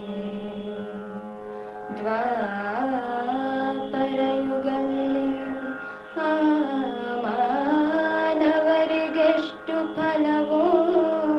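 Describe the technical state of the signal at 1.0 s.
At 1.0 s the signal is intact, with nothing beyond the ordinary coding character of the call path it passed through.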